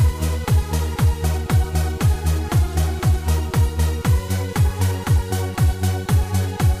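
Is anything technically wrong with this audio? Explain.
No, nothing technically wrong can be heard here.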